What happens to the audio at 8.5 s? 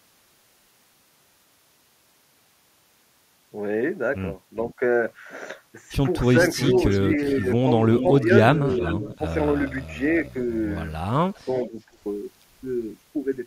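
A delayed copy of the speech trails behind it from 7.95 to 9.18 s, arriving 371 ms late and roughly 10 dB quieter. This echo leak is likely from a far-end loudspeaker whose echo canceller let some of the microphone's pickup of the call return.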